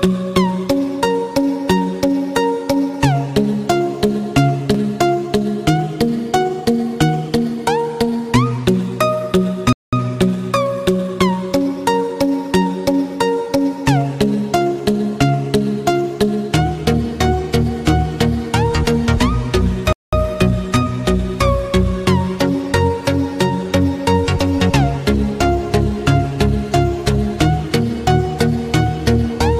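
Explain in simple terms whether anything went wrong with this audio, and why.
Two gaps between chunks, at 9.73 to 9.93 s and 19.93 to 20.13 s: the audio was joined in 10-second pieces, leaving 0.2-second silent holes.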